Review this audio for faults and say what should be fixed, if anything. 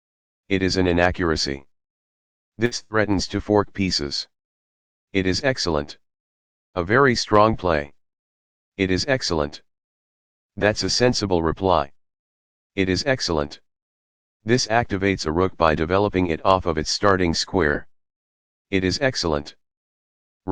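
Two bursts of packet loss occur, at 2.65 to 2.74 s and 2.83 to 2.94 s. In each, roughly 60 ms of audio never arrived in time; the receiver extended the preceding sound for about 60 to 70 ms, fading it, then skipped ahead. Larger jitter buffering with forward error correction or redundant packets would prevent these gaps.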